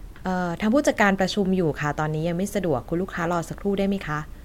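No technical faults can be heard anywhere in this recording.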